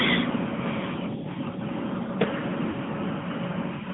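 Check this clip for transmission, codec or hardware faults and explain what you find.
Two faults are present: the speech has passed through a narrowband mobile codec, and a short burst of lost frames interrupts it later on.

AMR narrowband mobile codec, throughout: The speech was coded with AMR-NB, which rebuilds the voice from a vocal-tract filter excited by a handful of pulses in each frame. The buzzy, slightly synthetic edge is plainly audible and fits one of the mid-rate modes, around 10.2 kbps. The line band runs from about 150 Hz to 3.4 kHz, so the sound is thin, with no low body and no top end.

Lost AMR speech frames, from 2.70 to 2.76 s: For about 40 ms, which fits two missing 20 ms frames, the decoder had no valid data. It carried forward the last good pitch and filter settings at reduced gain. The result is a brief smeared, warbling dip where the sound stretches and sags before normal decoding picks up again.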